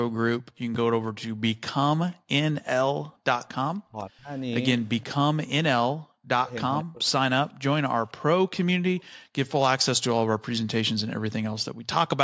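Background gated by the echo canceller, 0.41 to 3.24 s: while the far side played, the canceller pulled the microphone down by about 40 dB, so the room sound drops out for roughly half a second in total.

Speech suppressed in double talk, 3.87 to 6.98 s: the talker dips by around 40 dB, in pieces adding up to about 0.7 s, likely because the canceller mistook overlapping talk for loudspeaker echo. Within that stretch the background gating returns briefly, 5.93 to 5.98 s, again about 40 dB down.

Echo leak, 6.80 to 6.84 s and 8.99 to 9.03 s: the canceller likely let through loudspeaker sound, heard as short scraps of a copy 497 ms late, about 25 dB and 30 dB below the talker.

Background gating recurs at 9.05 to 9.35 s and 11.73 to 11.87 s, the room sound cutting out by about 40 dB each time. Throughout, nothing reaches above 8 kHz, consistent with call microphone processing.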